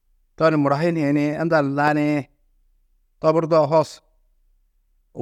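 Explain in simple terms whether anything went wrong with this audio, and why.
A single sharp loud pop cuts through the speech from about 1.88 to 1.90 seconds, a quick click that stands out louder than the talking while the speech carries on underneath. It was likely caused by a sudden electrical jolt, such as a plug, switch or static discharge, entering the signal.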